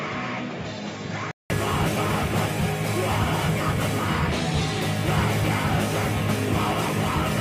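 From 0.0 to 1.5 s the input was likely switched to a poorer device, which passes nothing above 7.3 kHz, so the sound is dull, a few dB quieter, and carries its own faint noise floor, before a 0.19 s silence and a clearer return.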